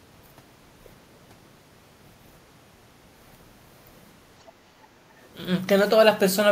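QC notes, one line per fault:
4.47–4.52 s and 5.24–5.28 s, other side's voice leaking through: two brief, very faint scraps of a second voice, each about 40–50 ms long and far below the main speech, the first about 35 dB down and the second about 40 dB down. They are likely remnants of the far end playing on the talker's loudspeaker and being picked up again by the microphone, with the echo canceller not removing all of it.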